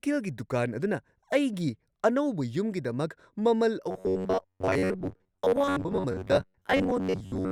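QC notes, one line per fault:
3.91–7.51 s, robotic sound from repeated short buffers: new audio likely arrived too seldom, so playback kept looping the last fragment of about 11 ms while most of the real signal was skipped. The fixed repetition rate imposes a rigid, metallic 93.8 Hz buzz on the speech through to the end.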